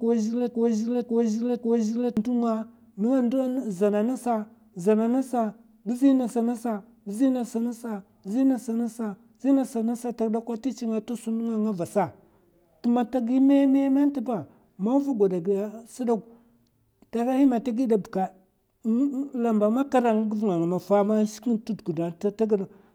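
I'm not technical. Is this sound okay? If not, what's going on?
No. From the very start until 2.17 s, the same half-second piece of speech (about 0.54 s long) plays over and over, already repeating when the clip begins. That's a broken-record loop, likely a stalled player or stream resending its last fragment, so whatever came next there is lost.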